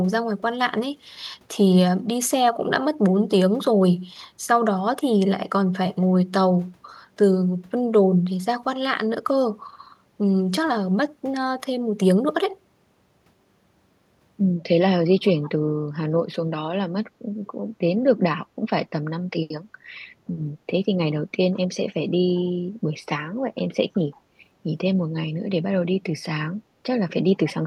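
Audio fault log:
15.27–15.49 s and 22.36–22.40 s, echo leak: faint copy of the speech trailing by 159 ms, about 25–30 dB down, likely a far-end echo canceller missing loudspeaker pickup.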